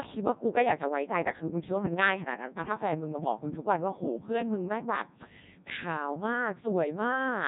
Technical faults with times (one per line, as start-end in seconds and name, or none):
0.00-7.48 Codec 2 vocoder